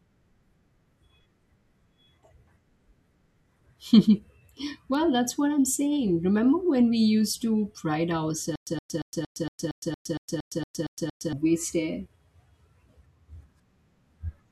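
A bit error spike lands at 4.95 s, just before "that's what I'm saying": a single sample jumps by a power of two and snaps back, so one bit flipped in storage or transfer. It is heard as a lone, sharp broadband tick unrelated to the surrounding speech.

A stutter with silent gaps runs from 8.56 to 11.33 s, right after "we used to pride". A 119 ms fragment repeats 12 times, each followed by 112 ms of digital silence, giving an even 231 ms rhythm. The likely cause is a stalled stream replaying its last buffer on each retry, and the speech meant for that stretch is lost.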